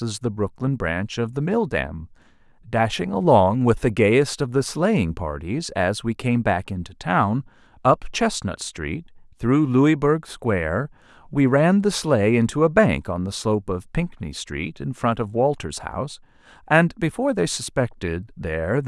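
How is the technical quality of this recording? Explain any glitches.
No technical faults can be heard anywhere in the recording, and the signal remains steady and intact throughout.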